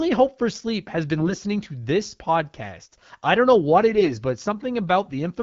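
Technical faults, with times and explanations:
1.18–1.38 s and 3.89–4.13 s, AMR bit errors: the wideband AMR speech briefly turns hoarse and gargly while keeping its pitch and level. Flipped, weakly protected bits misplace the excitation pulses and skew the finer pitch, gain and spectral values. The first burst is rougher, at about one bit in ten against one in twenty. On a spectrogram the harmonic striations smear into scratchy broadband texture, while the waveform envelope stays roughly intact.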